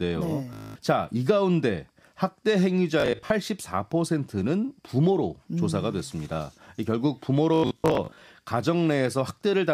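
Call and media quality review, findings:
Bluetooth stutter, 0.53 to 0.76 s: rapid repeat of a short slice, about 224 ms of audio lost, with sound resuming further on. The receiver is replaying its last buffer while link packets arrive late or not at all.

Bluetooth stutter, 3.00 to 3.30 s: 168 ms lost in brief bursts spread over 0.3 s, longest run 37 ms. Same buffer-replay mechanism.

Bluetooth stutter, 7.54 to 8.22 s: worst event, 373 ms lost across 0.67 s, with one 93 ms run heard as a buzz. Points to sustained dropouts on the Bluetooth link.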